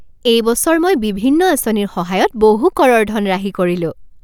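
Nothing here sounds wrong: the speech runs along steadily with no technical faults to point to.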